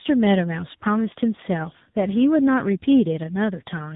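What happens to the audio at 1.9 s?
At 1.9 s the speech is affected by tandem speech coding that runs through the whole clip. The audio appears to have passed through two speech codecs in a row, likely ADPCM followed by AMR-NB at a low bitrate, with each one recoding the other's degraded output. The result is rough, muffled, warbly speech with nothing above 3.8 kHz.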